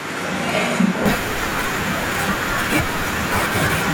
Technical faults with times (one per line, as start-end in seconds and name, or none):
0.00-1.06 switch to a distant microphone